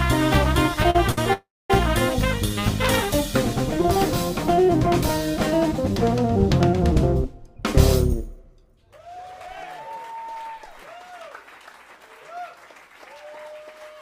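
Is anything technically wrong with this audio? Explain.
Yes, four related network timing faults.

At 0.90 to 0.96 s and 1.12 to 1.18 s, short stalls from a late packet hold the sound for 43 ms and 55 ms with a slight buzz or dip. Nothing is lost, unlike a dropout.

From 1.33 to 1.71 s there is a call audio freeze. The sound stretches into a fading buzz or hiss, then about 250 ms of silence, before resuming where it stopped. This is likely packets held up on the way, and it is longer and emptier than the stalls.

From 7.56 to 10.36 s, a jitter buffer speed-up trims tiny pitch-period pieces, about a fifth of a second in total. The audio runs 8% faster at unchanged pitch, which is hurried rather than choppy.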